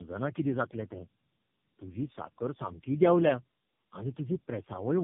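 A short speech clip that suffers from tandem speech coding across its whole length: it sounds rough, muffled and warbly beyond what one narrowband codec would produce, which fits three low-rate speech coders in a row, GSM full rate followed by two AMR-NB stages, with G.711 links between them. Each coder re-encodes the previous one's errors. On a spectrogram, nothing sits above 3.5 kHz, and harmonics look smeared and patchy.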